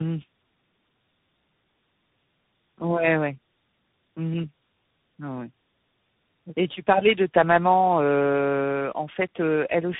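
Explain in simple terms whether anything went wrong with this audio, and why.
Yes, something went wrong, from start to finish. The speech shows tandem speech coding: it sounds squeezed through about three phone-style speech coders in a row, each rebuilding the sound from the previous one's already damaged copy. Nothing is left above about 3.8 kHz, so it sounds muffled, with a rough, warbling edge. A single coder would sound cleaner, and simple muffling alone wouldn't add that stacked-up roughness.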